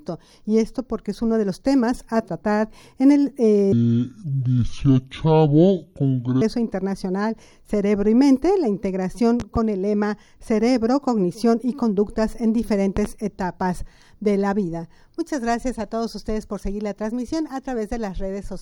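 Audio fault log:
3.72–6.42 s, section at the wrong speed: the sound turns deep and sluggish, about ten semitones lower, running at 0.6 times normal speed, likely from playback on a mismatched clock.
9.40–9.59 s and 12.97–13.08 s, loud pop: each is a sharp double pop, roughly 10 dB above the sound, which carries on underneath, likely from a voltage pulse such as static or a switch.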